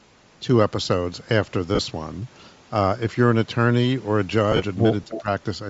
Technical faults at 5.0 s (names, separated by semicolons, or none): Bluetooth LC3 compression; echo leak; speech suppressed in double talk